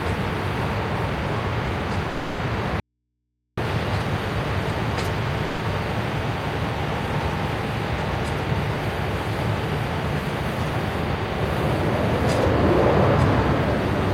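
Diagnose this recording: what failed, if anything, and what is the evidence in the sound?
Call audio freeze in the network path: delayed packets likely drained the jitter buffer. At 2.10 s and 5.45 s the sound smears into a fading buzz or hiss for 0.29 s and 0.14 s, then resumes intact.

Audio dropout to a faint residue, likely a broken analogue connection with the input left open. From 2.80 to 3.57 s the sound cuts abruptly to mains hum roughly 55 dB down.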